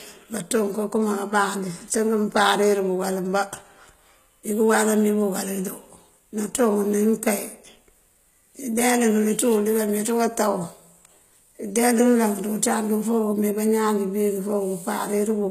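From start to finish the speech has nothing above 14.9 kHz and carries the coarse artefacts of a very low-bitrate encode. It is likely low-bitrate audio saved at a high bitrate: the sound fits about 20 kbit/s HE-AAC re-encoded to MP3, which cannot restore what was lost.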